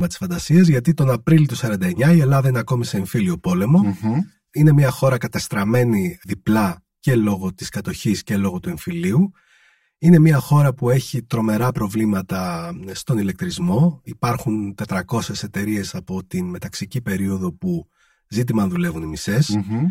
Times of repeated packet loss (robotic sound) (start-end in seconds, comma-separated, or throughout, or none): none